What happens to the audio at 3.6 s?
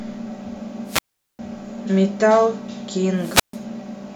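A wireless microphone squelch dropout runs from 3.17 to 3.60 s. The transmitter's radio signal fades until the receiver's squelch cuts the output, so hiss rises briefly, then a near-silent gap of about 138 ms opens before the speech comes back at 3.6 s.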